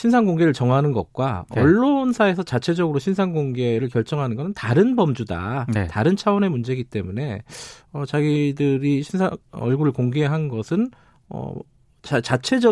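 Nothing in the speech recording stands out as a technical fault: the level holds steady, the signal stays continuous, and no part of it sounds broken or distorted.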